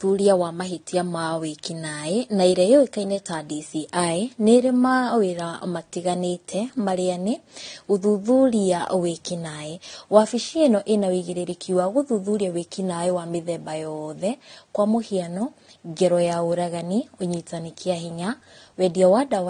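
Speech, with transcoding between lossy codecs audible throughout. Nothing is present above 9.7 kHz, and two distinct sets of compression artefacts overlap. The likely chain is a Vorbis encode re-encoded to low-bitrate AAC-LC, which spends bits reproducing the earlier damage.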